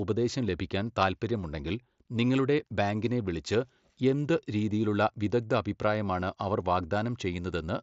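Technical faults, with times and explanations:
The speech carries the band-limited, wideband character of a Bluetooth mSBC headset link, extending to about 8 kHz, with only the light graininess that codec leaves on louder passages.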